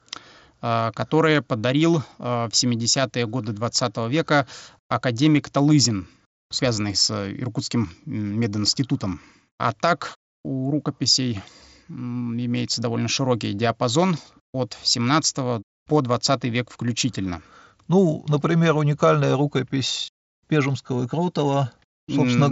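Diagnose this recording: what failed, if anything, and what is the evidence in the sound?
Nothing in this speech recording has failed. What can be heard is a working Bluetooth mSBC headset codec: the sound stops at about 7.7 kHz, with only light codec graininess on louder passages.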